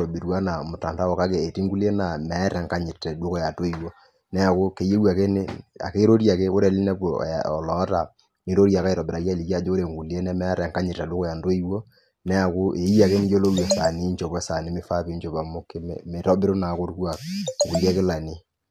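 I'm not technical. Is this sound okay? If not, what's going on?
Yes, nothing stood out as a problem when listening to this recording.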